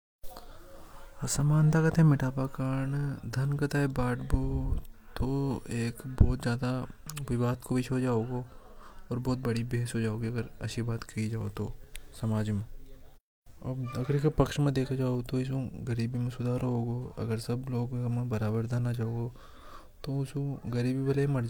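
No technical faults can be heard at any point in this speech clip.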